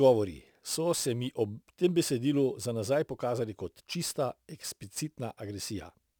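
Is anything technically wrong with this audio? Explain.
Yes. Throughout the speech there is crude rate conversion: samples were repeated rather than filtered, which fits a 44.1 kHz to 48 kHz change. The repeating error makes an inharmonic fizz, roughly 25 dB below the speech, that tracks loud, bright syllables, unlike codec swirl, which warbles.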